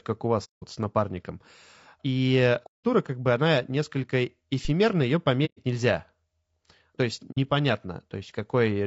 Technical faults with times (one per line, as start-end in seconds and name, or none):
0.00-8.86 low-delay AAC compression
0.44-0.64 AAC frame loss with muting
2.66-2.85 AAC frame loss with muting
5.45-5.60 AAC frame loss with muting
7.32-7.38 AAC frame loss with muting